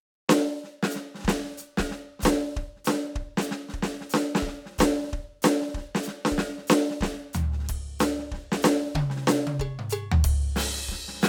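No technical faults can be heard in this music. Nothing along its length stands out as a problem worth marking.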